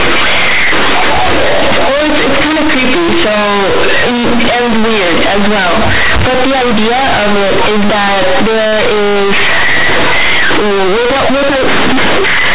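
Speech runs through a telephone-style G.711 path, mu-law at 8 kHz, but throughout the clip the bytes are companded audio read as linear. The logarithmic mu-law codes are played as plain 8-bit samples with no expansion, so every zero crossing flips the sign bit and throws the output across about half its range. Quiet passages come out as loud as peaks, giving harsh, buzzy distortion and heavy noise in pauses. The waveform looks like a near-full-scale slab with abrupt jumps, and the spectrogram shows dense broadband energy up to the 4 kHz ceiling with no dark gaps between phrases.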